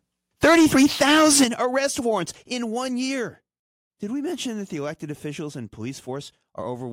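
The microphone input level was likely set too high. From 0.43 to 1.44 s, the peaks drive about 10 dB past the converter's ceiling, which points to microphone overload. The tops of the waveform are sheared flat on roughly a seventh of the samples in that stretch. The loudest parts of the speech take on a harsh, crackling, buzzy edge.

In response, the call software likely lowered the device's input gain in discrete jumps: microphone volume stepped down three times. At 0.45 s the level drops by about 2 dB, just as the clipping begins. At 1.44 s it falls by about 9 dB, right where the overload ends. At 2.46 s a further cut of about 5 dB follows. Each step makes the speech and the background noise behind it sink together in one abrupt move, and the step at 1.44 s is the largest.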